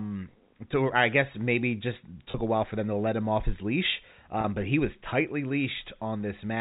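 At 2.31–2.34 s, after "I guess maybe just", and 4.41–4.44 s, after "him off his leash", packet loss with pitch repetition fills each 30 ms gap with a briefly held, buzzy tone rather than silence.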